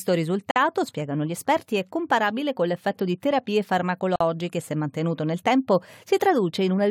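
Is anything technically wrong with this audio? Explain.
Yes. There are two gaps at a join of encoded pieces. One runs from 0.51 to 0.56 s, about 50 ms, just before "spiegano gli esperti è". The other runs from 4.16 to 4.21 s, about 47 ms, right after "con l'effetto di terapie". At each join, the separately encoded pieces keep their encoder start delay and last-frame padding. The result is a brief silence with smeared edges. Unlike a dropout, no speech is lost: it resumes exactly where it stopped.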